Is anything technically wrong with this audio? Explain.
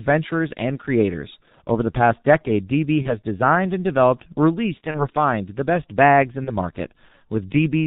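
Yes. The speech has passed through the G.723.1 codec at about 6.3 kbit/s, heavily damaged. With nothing above 4 kHz and a slowly updated voice model, it sounds muffled and hoarse with smeared consonants. A spectrogram shows a hard ceiling at 4 kHz and blurred, blocky formant detail.

VoIP packet loss concealed by the speech codec occurs at 3.02–3.09 s, just before "designed and developed released"; at 4.91–5.08 s, between that phrase and "the best bags in"; and at 6.44–6.51 s, just after "the best bags in". Each gap fits one lost 30 ms frame. The decoder fills it by repeating its last pitch and filter at falling gain, producing a brief buzzy or coloured smear that stays weak as it recovers. A spectrogram shows flat, repeated harmonic bands, and the waveform shows a decaying envelope.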